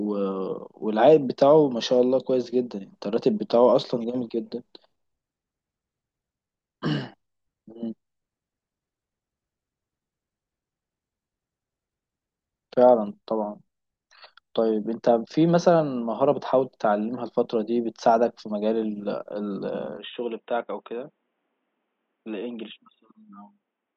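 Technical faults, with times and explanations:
19.97 to 23.96 s, input switched to a poorer device: the speech abruptly turns boxy, loses everything above 3.8 kHz, drops roughly 5 dB and gains a faint new noise floor, with no gap. The likely cause is a device change. A simple filter or codec change would not also shift level and noise.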